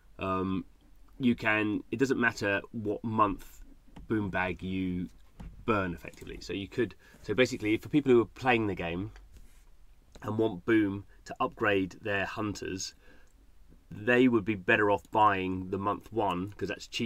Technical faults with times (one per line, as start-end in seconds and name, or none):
none